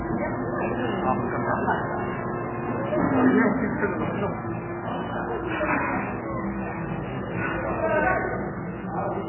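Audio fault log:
throughout, MP3 compression: nothing survives above 3 kHz and the audio goes watery and swirly, likely heavy MP3 encoding at a starved bitrate around 8 kbps.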